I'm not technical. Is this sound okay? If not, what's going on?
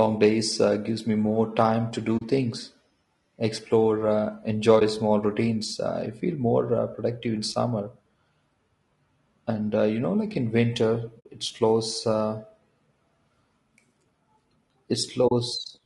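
No. The speech sounds rough and grainy throughout, with a hiss-like fuzz around the voice and a thin, slightly artificial top end. That is likely low-delay AAC compression, the kind used for video calls, squeezed hard enough that it can't keep the voice clean.

There are also four brief soft dropouts, AAC frame loss with muting: the sound fades to silence and back. They fall at 2.17 s after "me more time to", 4.79 s between "explore uh" and "small routines", 11.19 s between "know like in winter" and "it slows uh", and 15.27 s, each lasting 20 to 60 ms.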